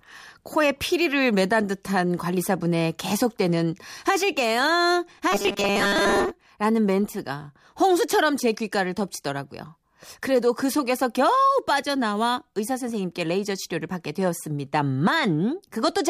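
From 5.32 to 6.32 s, audio likely stopped arriving fast enough, so the playback side kept repeating its last short buffer in place of the missing sound, roughly 70 percent of the time. That repetition is the robotic sound from repeated short buffers: the loop imposes a fixed 200 Hz buzz, which fits a repeat about 5 ms long. For that second the speech becomes a hard, metallic drone that only loosely tracks the original.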